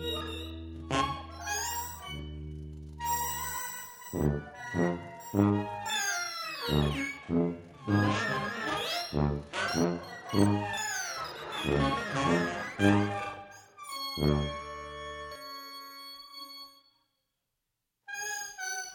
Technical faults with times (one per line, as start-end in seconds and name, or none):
0.00-18.95 channel delay (doubling)